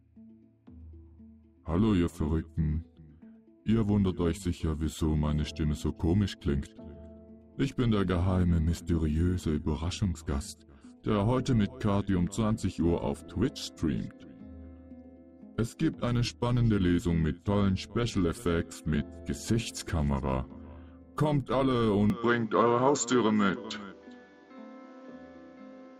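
At 22.1 s the sound abruptly turns duller and narrower, with nothing above 7.6 kHz and a faint new background noise well beneath it, while the level stays about the same. This is likely an input switched to a poorer device, with no gap at the change.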